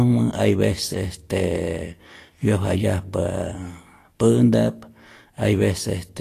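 Throughout the speech, nothing sounds above 14.2 kHz. The treble is hissy and grainy, and attacks are blurred. This is likely Vorbis compression at a low setting. Coarse treble quantisation turns fine detail into noise. The damage fits about 36 kbps.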